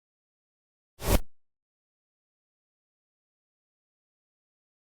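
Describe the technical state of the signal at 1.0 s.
The signal is intact at 1.0 s, where the sound is just beginning a clean, gradual fade-in with no click or hard edge.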